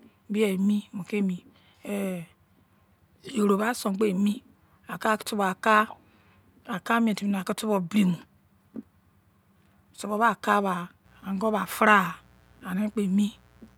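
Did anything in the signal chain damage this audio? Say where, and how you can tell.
Yes. Mains buzz entered the analogue wiring, likely through a missing shield or a nearby dimmer. From 11.02 s to the end, a steady raspy buzz sits roughly 35 dB under the speech. Its sharp spikes repeat twice in every 60 Hz mains cycle, with harmonics reaching into the kilohertz range.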